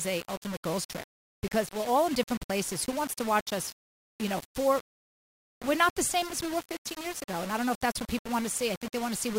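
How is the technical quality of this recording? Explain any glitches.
Rough, honestly: a grainy distortion runs through the whole thing and rides along with the sound. It's likely low bit depth without dither, around 5 bits with plain rounding, so the error tracks the signal, sitting only about 15 dB down, and quiet passages turn gritty or sputter.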